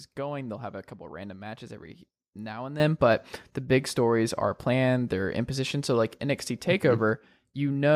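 At 2.8 s a sudden gain jump raises the level by about 12 dB, and it holds there to the end of the clip. The speech and the background noise step up together in a single instant, with no fade between the two levels, so the change is abrupt rather than a natural rise in loudness. The likely cause is a digital gain setting applied from one sample to the next without a ramp.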